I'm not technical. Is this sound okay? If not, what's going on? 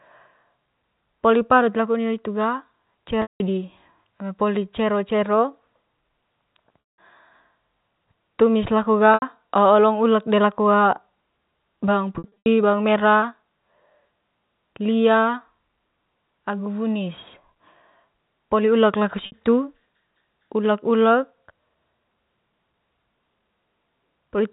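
No. The speech has packet loss with pitch repetition: parts of the signal went missing, and the receiver filled each gap by looping the last bit of voice. This happens at 3.22 s (before "di eme poli cero"), 6.89 s, 9.14 s, 12.18–12.46 s (scattered, before "bawang mera") and 19.26 s, heard as brief buzzy holds or dropouts. The telephone-style sound is the normal G.711 telephone coding.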